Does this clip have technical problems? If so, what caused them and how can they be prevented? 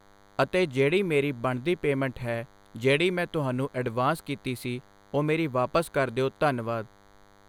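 Yes. DECT cordless phone buzz runs under the speech for the whole clip: a steady, thin buzz at 100 Hz, full of harmonics, sitting well below the speech level. A nearby DECT handset or base station transmits a short radio burst every 10 ms, and some stage in the audio chain rectifies that energy, turning the burst rhythm into an audible tone. Keeping DECT phones and bases away from microphones, cables and interfaces, and using shielded balanced cabling, prevents it.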